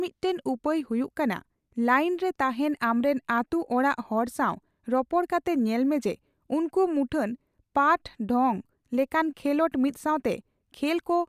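No technical faults can be heard anywhere in the speech. Nothing in the audio gives a listener reason for technical comment.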